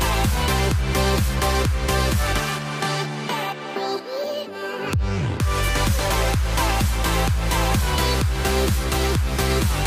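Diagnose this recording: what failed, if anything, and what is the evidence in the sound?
Nothing failed; no faults heard.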